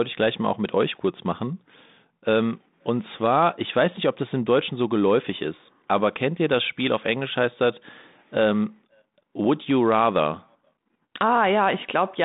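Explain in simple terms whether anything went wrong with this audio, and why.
Nothing went wrong that I could hear; listening through the whole recording, no problem stood out.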